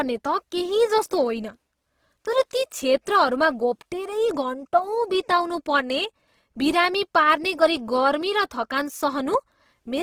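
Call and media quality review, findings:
Opus compression throughout the speech, likely. Grainy, rough, noisy texture, plainly audible. Fits a low-rate CELT-mode encode near 16 kbps, bands noise-filled. Full bandwidth kept.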